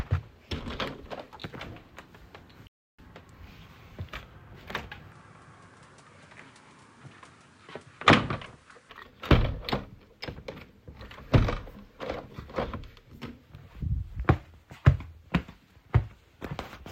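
At 2.67 s the sound stops dead in mid-flow. It stays silent for about 0.31 s, until 2.99 s. Then it carries on. This is a playback stall. The player was likely starved of data or blocked, so nothing reached the output.

From 5.12 s to 8.90 s the tone turns duller. The level drops by about 5 dB, and new background noise sits roughly 30 dB below the signal. There is no gap at the change. This points to the input having switched to a poorer device, likely another microphone with a narrower band.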